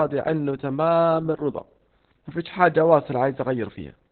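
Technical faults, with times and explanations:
Throughout, Opus voice compression: the speech is cut off above 4 kHz and sounds muffled, hoarse and slightly robotic. The SILK linear-prediction coder, running narrowband, codes the excitation very coarsely, which fits a low bitrate around 8 kbps.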